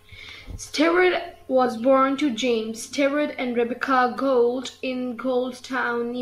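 No technical faults are audible.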